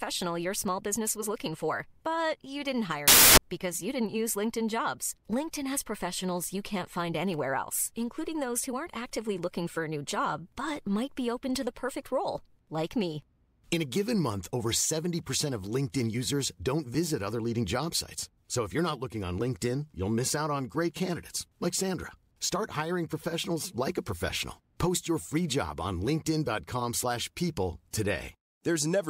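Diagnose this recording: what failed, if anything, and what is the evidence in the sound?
The sample-format conversion stage failed: from 3.08 to 3.38 s, just before "because you didn't use", the speech turns into loud, harsh broadband noise. These are samples built from the wrong bytes, so the rapidly changing low bits dominate each value. A spectrogram shows broadband noise; the waveform becomes a dense block.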